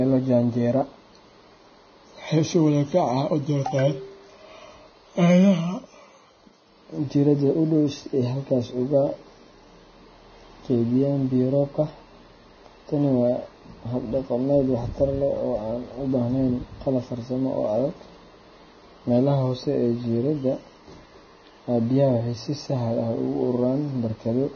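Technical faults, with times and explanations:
Throughout, Vorbis compression: heavy damage makes the speech hissy and grainy, with nothing above 6.5 kHz and blurred consonant attacks, which fits a bitrate around 18 kbps. Unlike a clean low-pass filter, the remaining treble turns to noise, likely from coarse quantisation.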